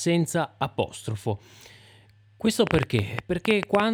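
From 2.67 s to the end of this speech clip at 3.93 s, a train of clicks runs over the audio. There are roughly fifteen of them, about 9.5 per second, at an uneven spacing. Each one peaks around 20 dB above the signal, so they tick sharply through the speech and through the gaps. The likely cause is interference from nearby equipment or a faulty connection or power supply. On a waveform they show as thin, near-identical spikes. On a spectrogram they appear as narrow vertical broadband lines.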